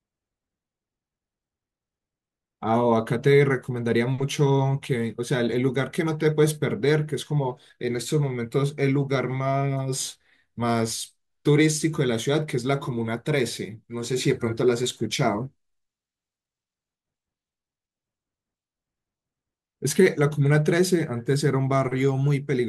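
Nothing technical stands out in this speech recording, so there's no fault to point to at any moment.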